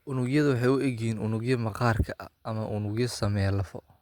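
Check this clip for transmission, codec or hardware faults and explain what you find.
No faults can be heard anywhere in the speech.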